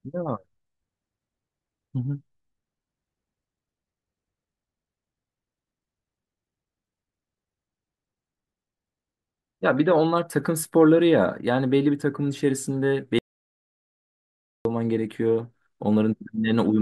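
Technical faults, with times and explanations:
13.19–14.65 s, audio dropout to silence: the speech stops dead for 1.47 s of silence, without room tone. The input was likely lost while recording continued.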